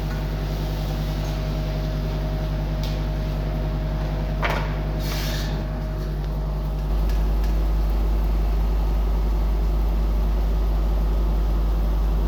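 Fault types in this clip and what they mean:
doubled audio track: from 6.9 s, an equally loud copy trails about 300 ms behind, likely from a second capture path; waveform and spectrogram show every onset twice, with no decay.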